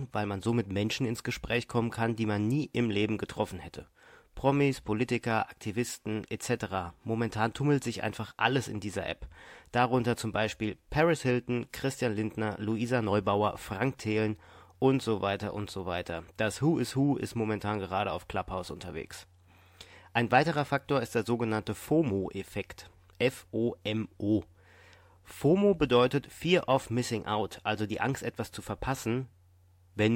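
Listening to this speech recording, nothing technical stood out.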